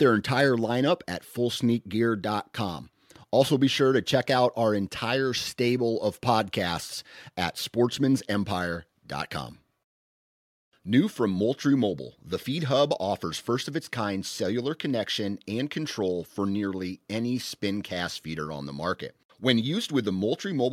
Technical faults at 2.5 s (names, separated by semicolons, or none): none